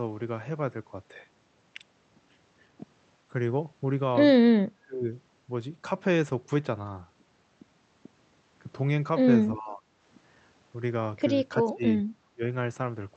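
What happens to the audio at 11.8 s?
At 11.8 s the speech dips sharply for about 0.2 s, from 11.64 to 11.84 s, falling by roughly 25 dB. This is likely speech suppressed in double talk. The echo canceller couldn't separate this talker from loudspeaker echo while both sides spoke, so it pulled the level down.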